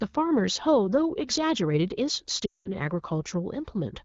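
At 2.45 s there's a run of lost AMR speech frames lasting to 2.70 s, which fits about ten dropped 20 ms frames. The wideband decoder repeats its last good settings with falling gain, so the sound smears briefly, fades to silence fast, then returns weak or rough.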